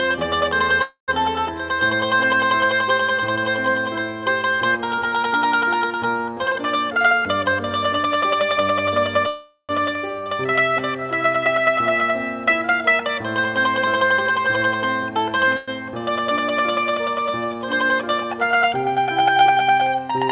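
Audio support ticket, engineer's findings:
Call audio freeze at 0.82–1.10 s, 9.27–9.71 s and 15.57–15.70 s: sound stretched into a fading buzz, then resumes where it stopped. Likely jitter buffer underrun; a pause, not a dropout.

Jitter buffer speed-up at 6.45–8.56 s (111%, roughly 0.3 s cut) and 13.39–15.38 s (108%, about 0.15 s): hurried but same pitch, unlike resampling. Narrowband call path, nothing above 4 kHz.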